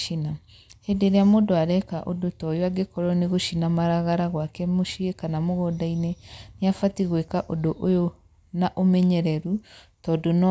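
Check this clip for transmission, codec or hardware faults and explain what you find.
Checking the clip turns up no faults to explain.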